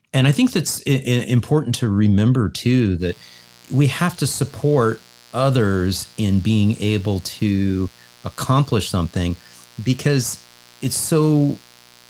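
Mains buzz enters at 2.98 s and continues to the end of the speech. Something in the signal path, such as a dimmer, a rectifier or an unshielded cable, is letting sharp switching spikes from the 60 Hz supply into the audio, two per cycle, so the interference repeats 120 times a second. Its harmonics stack upward into the kilohertz range, giving a steady, raspy buzz that sits roughly 30 dB below the speech.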